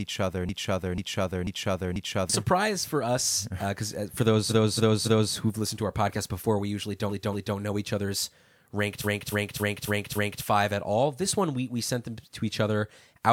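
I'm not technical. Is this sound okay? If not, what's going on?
No. Two kinds of fault can be heard in this speech clip.

The first is a broken-record loop. From 0.49 to 2.30 s, one half-second scrap of sound plays four times in a row, exactly the same each time. It ends just before "surprise for us because". The player or stream most likely stalled and kept replaying the last piece it held. Whatever should have been heard in those seconds is gone.

The second is repeated frames. A short chunk of the recording gets replayed, like a stutter. From 4.48 to 5.32 s, between "because uh uh for" and "who've listened to our", a 0.28 s chunk plays three extra times. At 7.08 to 7.55 s, a 0.23 s chunk plays twice more. From 9.03 to 10.43 s, between "know each other's ranked" and "five at all", a 0.28 s chunk repeats five extra times. Each stutter makes the clip longer.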